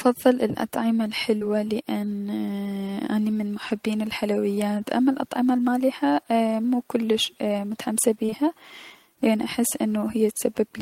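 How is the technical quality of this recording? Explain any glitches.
The recording has six short dropouts from short concealed packet loss. They fall at 1.37–1.43 s, 3.69–3.72 s (right after "اني من"), 4.54–4.59 s (just before "اما الأطعمة المالحة مو"), 7.25–7.28 s (right after "اما الأطعمة المالحة مو"), and in two back-to-back gaps at 8.26–8.34 s. Each time, 20 to 40 ms of the speech arrived too late to decode. The receiver filled the gap by extending the preceding sound, then crossfaded back into the real audio. The result is a brief smear or wobble, and a clipped consonant is possible. The double gap near 8.3 s is the longest stretch to be bridged.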